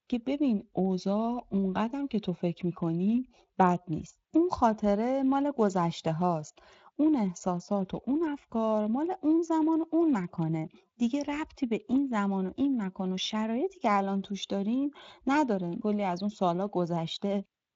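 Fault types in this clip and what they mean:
No faults are present.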